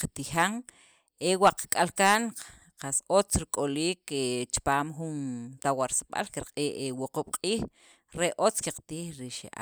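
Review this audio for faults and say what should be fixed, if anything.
Nothing needs fixing here; I listened through and didn't hear any technical faults in the recording.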